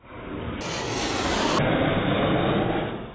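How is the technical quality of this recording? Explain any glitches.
The recording has one clear glitch. From 0.61 to 1.59 s, a wrong sample rate plays the sound twice as fast and an octave high, which fits 8 kHz material played at 16 kHz. On a spectrogram, features stretch upward and compress in time; waveform cycles look squeezed.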